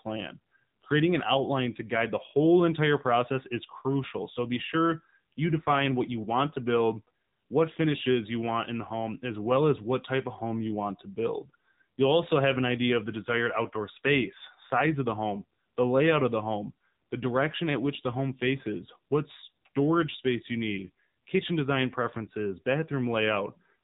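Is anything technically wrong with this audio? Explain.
Yes. AMR narrowband mobile codec damage runs through the entire speech clip. The audio has passed through AMR-NB, the old 2G/3G phone codec, which keeps only a narrow band and rebuilds the voice from a vocal-tract filter excited by sparse pulses. Nothing above about 3.8 kHz survives, so the speech sounds muffled and telephone-like. The damage is plainly audible as a buzzy, somewhat synthetic edge, which fits a low mode around 7.4 kbps.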